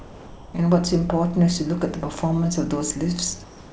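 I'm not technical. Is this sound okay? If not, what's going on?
No. There is comfort noise in place of the background at two points. The first runs from the start to about 0.54 s. The second runs from 3.44 s to the end. In these pauses the natural room hiss is replaced by a smooth, even noise that is slightly quieter. The likely cause is the call system going silent when nobody talks. The receiving end then fills the gap with made-up noise.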